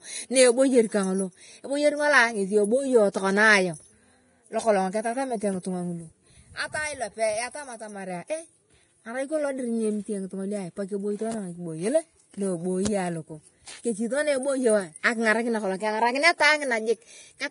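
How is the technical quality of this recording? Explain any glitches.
The speech carries heavy coding damage throughout. Nothing sounds above 10.6 kHz, and the treble is hissy and grainy. This is likely Vorbis compression at a bitrate near 29 kbps, where coarsely quantised high-frequency residue turns fine detail into noise and blurs attacks.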